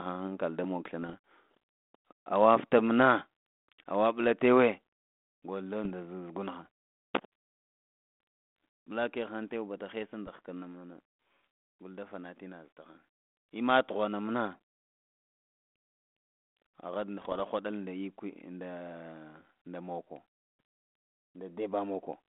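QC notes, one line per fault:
1.02–1.15 s, 5.84–5.94 s, 10.27–10.30 s (right after "tawe bada haisa") and 17.22–17.41 s: bit errors on an ADPCM link. Each spot pops, goes rough and briefly jumps in level because a few flipped bits, a fraction of a percent, throw off the decoder's step size and prediction, so the damage rings on past the hit. The 17.2 s burst is the longest. The narrow line band, about 200 Hz to 3.5 kHz, points to a 32 kbit/s G.726 link.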